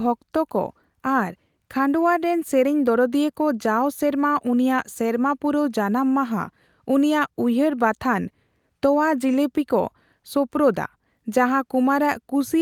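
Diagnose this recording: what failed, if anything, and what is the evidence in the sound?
Nothing in this speech recording points to a failure at any stage of the chain. No stage shows any evidence of a fault, so there is nothing to diagnose.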